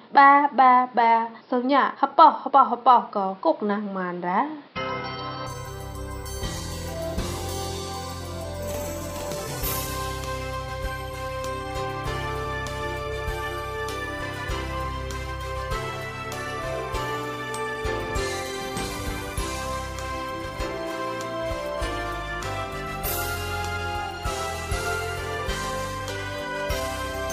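From the start to 5.47 s the sound is dull and boxy, with nothing above 5.6 kHz, a level shift of about 5 dB and a new noise floor roughly 30 dB down. The likely cause is an input switched to a poorer device: the jump without any gap sets it apart from a dropout.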